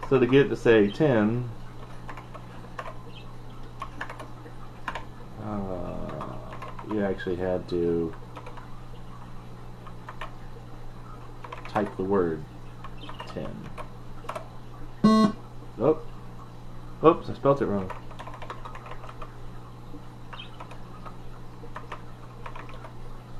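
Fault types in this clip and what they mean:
No faults can be heard anywhere in this audio.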